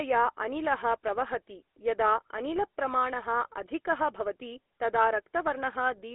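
GSM full-rate codec damage runs throughout the speech, plainly audible as a buzzy, gravelly roughness consistent with a 13 kbps stream. The codec models the vocal tract and drives it with sparse, regularly spaced pulses, and the band is confined to about 300 Hz–3.5 kHz, with nothing above 3.8 kHz.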